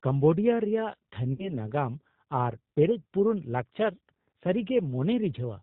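G.729 codec damage runs throughout: the speech is rebuilt at 8 kbit/s from a filter, pitch predictor and sparse pulses, so it sounds rough, synthetic and dull above 4 kHz. VoIP packet loss concealed by the speech codec appears from 1.33 to 1.55 s. About 60 ms went missing, consistent with two lost packets. The decoder stretched its last frame into a fading buzzy tone or coloured noise, and the speech stays weak afterward.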